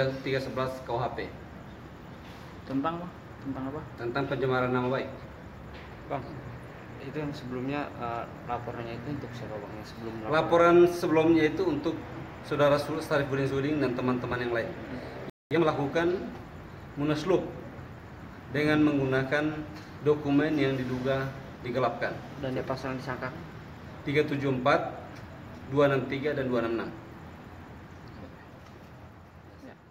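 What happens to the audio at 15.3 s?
At 15.30 s the sound cuts out abruptly and stays silent for about 210 ms, until 15.51 s, before carrying on. This is a playback stall, likely caused by the player running dry of buffered data or having its output thread briefly blocked.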